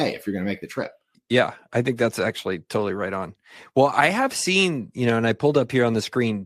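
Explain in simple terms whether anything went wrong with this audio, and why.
Listening to this speech recording, nothing went wrong that I could hear.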